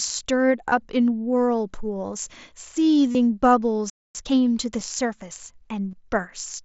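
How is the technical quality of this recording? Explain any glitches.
The recording carries a handful of brief glitches: four concealed dropouts, one silent gap and a short hurried stretch after it. Through the mSBC headset link, the speech reaches up to about 8 kHz with a light graininess on louder sounds.

Concealed Bluetooth headset packet loss occurs at 0.69–0.72 s, 3.12–3.15 s, 4.80 s and 5.92–5.93 s, lasting roughly 8 to 30 ms. When packets between headset and phone went missing, the receiver filled each gap by repeating the best-matching recent stretch of waveform. The longer fills give a buzzy tone held at full level and a slight warble on resumption. On a waveform they show as a short, unnaturally regular repeating pattern. On a spectrogram they appear as evenly spaced harmonic lines held flat.

The playback stall runs from 3.90 to 4.15 s, about 250 ms of silence breaking the speech mid-flow. 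The player most likely ran out of data or was briefly blocked, so output stopped until it recovered. The waveform drops to a flat line, and the spectrogram shows a clean blank vertical band.

Time-compressed catch-up follows immediately, from 4.15 to 4.39 s, at twice normal speed. The player trimmed its backlog by cutting out small pieces and cross-fading the remainder. Speech sounds rushed but keeps its normal pitch. The spectrogram shows squeezed syllables without any upward shift in frequency.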